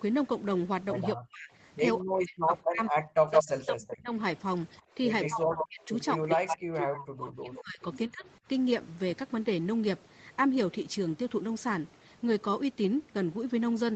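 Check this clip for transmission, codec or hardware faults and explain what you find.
Three kinds of fault appear, all pointing to echo cancellation on a speakerphone link rather than codec or hardware damage. The band tops out at 8 kHz throughout, which fits the Opus call path and its microphone processing.

Speech suppressed in double talk occurs from 1.15 to 4.12 s and again from 4.95 to 8.26 s. The speech dips, thins and breaks into pieces, with the deepest cuts reaching roughly 40 dB and about two seconds of audio affected in each stretch. The likely cause is an echo canceller facing simultaneous talk from both ends. Unable to tell local speech from loudspeaker echo, it attenuated everything.

Echo leak is heard from 3.31 to 3.93 s and from 4.72 to 7.0 s. A copy of the speech trails the original by 165 ms. In the first stretch it is about 5 dB louder than the direct speech, and in the second it sits about 5 dB below. 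This is likely residual echo: the far end's microphone picked up its loudspeaker playback, the canceller failed to remove all of it, and the remainder was transmitted back.

Background gated by the echo canceller occurs from 4.82 to 4.95 s. The room sound drops by about 11 dB for roughly 150 ms, then recovers. While loudspeaker playback was active, the canceller clamped the microphone hard, and it released once the canceller let go. The gap is audible as a brief hole in the ambience just as the echo leak begins.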